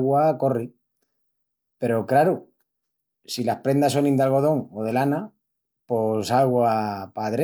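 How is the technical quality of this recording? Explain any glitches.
The technical quality of this recording is sound, with no glitches to explain.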